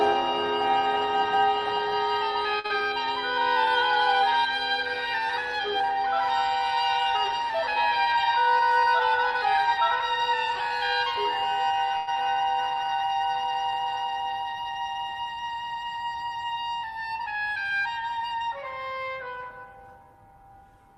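At 2.59 s a short stall from a late packet begins: the jitter buffer ran dry and the receiver held the last sound for about 48 ms until the packet came, then resumed from the same point. Nothing is lost, so it is heard as a sound held too long, not a hole.

Running straight on from 2.66 to 2.85 s is a short concealed packet loss. Here 40 ms of audio never arrived in time and was replaced by about 36 ms of synthesised continuation blended back into the real signal. The sound smears or wobbles briefly, and unlike the stall just before, real material is missing.

Between 7.99 and 8.60 s a jitter buffer speed-up trims pitch-period-sized pieces, removing about 70 ms, to shed excess buffered delay. The sound runs at 108% speed at unchanged pitch, which is a hurried stretch rather than a dropout.

At 11.97 s a call audio freeze lasts about 102 ms, likely from packets held up in transit. The last sound is extended throughout with no silence, then playback resumes where it stopped. 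It is longer than the earlier stall, but again nothing is missing.

A second short concealed packet loss follows at 12.15 to 12.18 s. Here 40 ms is missing but only 6 ms is filled, so it is heard as a quick jump forward that cuts the accumulated delay by roughly 30 ms.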